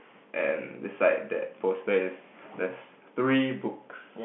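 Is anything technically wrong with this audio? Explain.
No, nothing's wrong here: it's just speech over an ordinary G.711 telephone line, so the sound sits in the usual phone band of roughly 150 Hz to 3.4 kHz with nothing above about 3.7 kHz, exactly as that format should sound.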